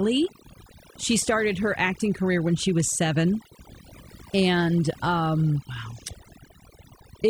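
A speech recording with overdone noise removal throughout, where a noise reduction stage was set far too aggressively for the amount of noise in the original. It pulls individual frequency bands down hard or shuts them off whenever they sit close to its noise estimate, and the softer parts of the speech get cut along with them. Between phrases the background collapses into near silence dotted with twinkling specks.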